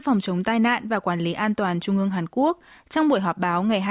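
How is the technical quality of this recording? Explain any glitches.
No audible glitches or faults.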